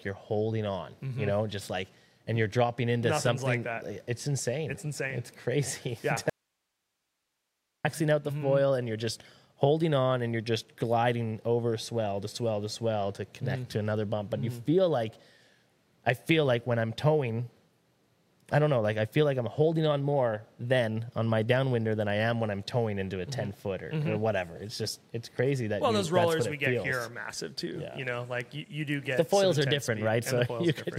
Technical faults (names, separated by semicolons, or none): audio dropout to a faint residue